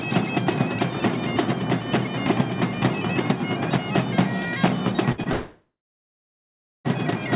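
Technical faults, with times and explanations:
5.12–5.20 s, burst of packet loss: Around 60 ms of audio drops out here, and the receiver covers it by stretching the last bit of sound it had and turning it down as it goes. You hear a short held buzz or fading hiss where the real audio should be. Then playback picks up again a little further along, with the stretch in between simply gone.
5.24–5.28 s, short concealed packet loss: Just after that there's a second, much smaller hole of about 20 ms. The decoder patches it by carrying on from the previous sound and then blending back into the real signal. It comes across as a quick smear or tiny wobble rather than an obvious gap, though anything very brief that fell in that slot is lost.
5.32–6.87 s, long network dropout: This is the big one. Around a second and a half of audio never gets played, most likely because the network stopped delivering for that whole stretch. 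The receiver keeps extending the last sound as a fading buzz or hiss, which sits under the same 4 kHz ceiling as the rest of the G.711 call. For roughly the final 1.15 s of the gap there's just silence. Audio returns at 6.87 s, further on, with that section missing.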